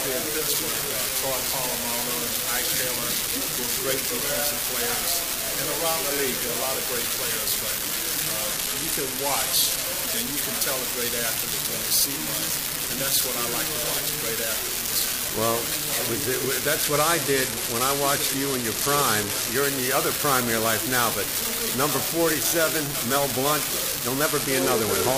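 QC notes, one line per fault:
8.52–9.82 s, 16.84–19.54 s and 24.25 s to the end: Bluetooth SBC bit pool drop. Each time the top end goes dull and a gritty, grainy noise creeps in, then clears once the rate recovers; the last one runs out with the clip. The link looks congested, so the encoder starved the upper sub-bands of bits and quantised the rest coarsely, which fits a bit pool falling from 31 to 13, around 94 kbps.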